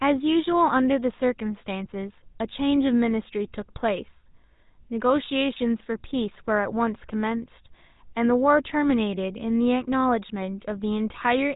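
Throughout the speech, GSM full-rate codec damage is plainly audible: a buzzy, gravelly roughness from pulse-driven vocal-tract modelling, consistent with a 13 kbps stream. A spectrogram shows a hard ceiling at 4 kHz, with coarse, smeared harmonics beneath.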